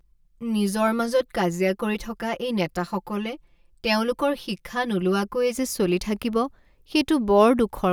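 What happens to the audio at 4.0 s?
At 4.0 s the audio sits inside a stretch of channel delay (comb filtering) running from the start to 5.55 s, just before "যে চলি থাকিব". One channel trails the other by roughly 5 ms, and when the two are folded to mono the shared content cancels at evenly spaced frequencies, with the first notch near 100 Hz. The speech sounds hollow and phasey until the delay clears.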